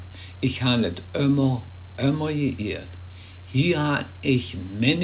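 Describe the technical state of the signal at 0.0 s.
At 0.0 s the signal is intact, with no dropout, glitch or distortion, only the narrow band of the WebRTC call path's G.711 A-law coding, which leaves nothing above 4 kHz.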